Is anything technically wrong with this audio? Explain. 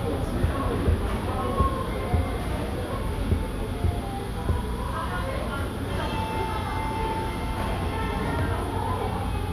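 No, nothing technically wrong can be heard here.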